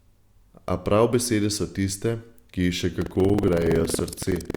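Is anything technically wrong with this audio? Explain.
Yes, there's buffer tearing from 2.97 s to the end. Writer and reader have slipped, so each buffer splices in a slice of older audio, giving the speech a robotic 21.5 Hz buzz, which fits a 2048-sample buffer.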